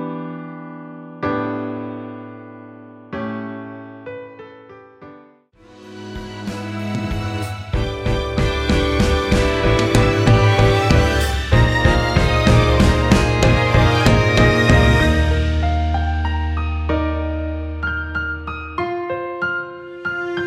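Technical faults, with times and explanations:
Nothing stood out on listening to this clip.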